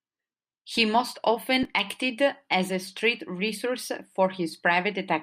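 No technical faults are audible.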